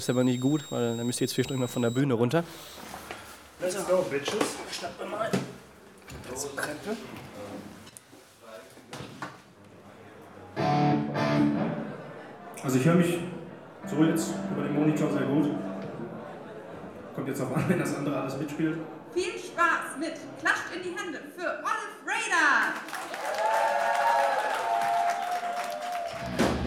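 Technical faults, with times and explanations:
0.0 to 2.0 s, switching supply whistle: a high whistle near 4 kHz, wandering between about 3.7 and 3.9 kHz, sits roughly 15 dB below the sound. A switching power supply running in an audible burst mode leaks its cycling frequency into the audio.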